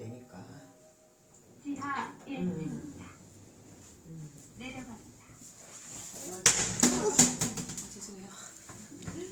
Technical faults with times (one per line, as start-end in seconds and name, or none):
0.00-9.31 Opus compression